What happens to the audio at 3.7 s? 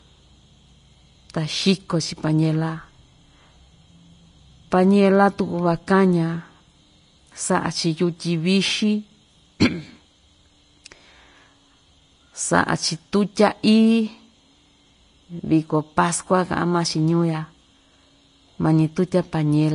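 At 3.7 s, as throughout the clip, the speech sounds hissy and grainy with nothing above 10.5 kHz, likely low-bitrate Vorbis compression replacing coarsely quantised treble detail with noise.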